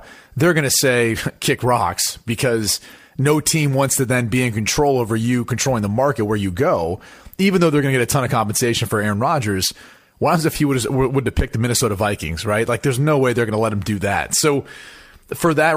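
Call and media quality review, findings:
Nothing stood out on listening to the speech recording.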